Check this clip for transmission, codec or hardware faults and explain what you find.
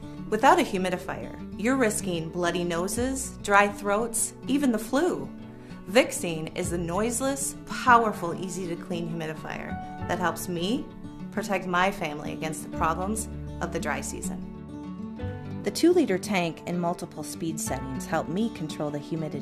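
One transmission fault is present: a corrupt frame concealed at 15.61 to 15.64 s. Bit errors damaged a compressed audio frame in transit, and the decoder detected the damage and replaced that stretch itself rather than playing out garbage. The affected stretch lasts about 30 ms, which points to a single damaged frame.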